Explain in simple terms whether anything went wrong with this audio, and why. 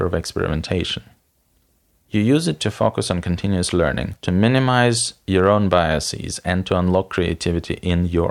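Nothing went wrong: the speech comes through steady and intact, with no audible faults anywhere in the recording.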